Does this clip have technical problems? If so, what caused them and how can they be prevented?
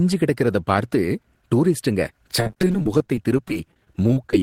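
Yes. From 2.40 s to 4.33 s the speech breaks up with repeated packet loss (robotic sound). Over that span, 31 short gaps, the longest 37 ms, were each patched by stretching the preceding sound. About 410 ms was filled this way and 320 ms simply went missing, so 21% of the span is concealment. This gives a choppy sound with pieces missing. On a spectrogram, harmonics freeze into flat horizontal smears broken by brief dropouts; the waveform shows repeated identical cycles and sudden notches. A larger jitter buffer, forward error correction and a more stable network connection would prevent this.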